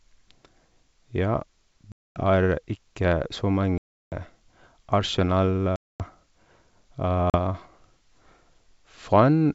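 Packet loss on an ADPCM call breaks this speech four times. Silent holes open at 1.92 to 2.23 s, at 3.78 to 4.21 s just after "ikke så", at 5.76 to 6.03 s, and at 7.30 to 7.36 s. They cover about 240, 340, 240 and 40 ms of lost audio, which fits roughly ten, fifteen, ten and two packets. Each gap starts and ends abruptly. The decoder's predictor and step size drift from the sender's, so speech returns slightly distorted and settles within tens of milliseconds. The G.722 wideband coding stays clear up to 7 kHz.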